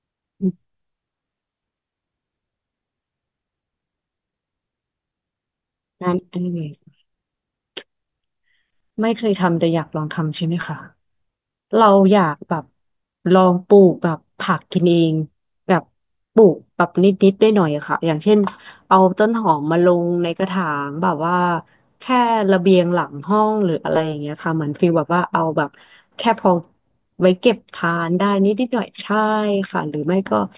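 Throughout the speech, sibilants sound gritty and metallic, with spurious tones crowding up to a hard edge near 4 kHz, roughly 30 dB below the speech. This is aliasing: the sound was downsampled without filtering first, which fits a drop to an 8 kHz rate.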